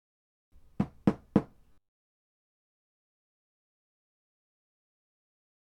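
From 1.73 s to 4.35 s the sound turns into a rigid metallic buzz at 100 Hz, robotic sound from repeated short buffers. The likely cause is audio arriving too seldom, so a roughly 10 ms buffer is looped over and over while most of the real audio is skipped.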